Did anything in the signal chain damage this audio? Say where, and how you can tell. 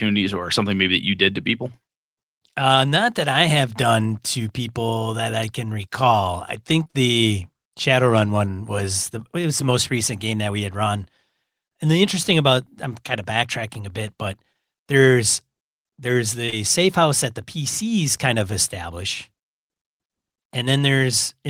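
Yes. The damage happened on the network: short concealed packet loss in two bursts. Right after "I can recall I", three consecutive gaps run from about 6.83 to 6.95 s. Between "bit but there's there's" and "safe house that the", two more run from 16.45 to 16.54 s. Each gap is about 20 ms of missing audio, which the receiver covered by extending the preceding sound and crossfading back. On a spectrogram this appears as smeared, over-regular harmonics or flat noise with blurred onsets. The waveform shows repeated periods where detail should be.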